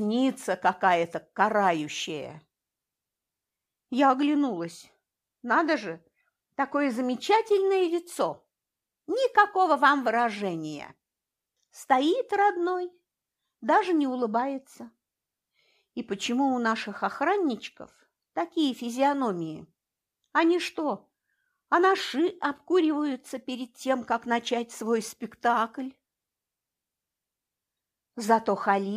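Nothing stood out as a technical fault on listening.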